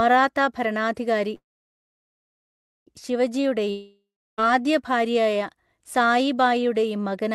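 From 1.35 to 2.89 s a call audio freeze stretches the last sound into a brief fading buzz, then about 1.5 s of near-silence. The sound resumes exactly where it stopped, which points to delayed packets that likely emptied the jitter buffer. From 3.71 to 4.47 s a long network dropout also fades into silence, here about 0.35 s. Unlike the freeze, roughly 0.68 s never returns, so the sound resumes further on, likely because packets were lost in transit.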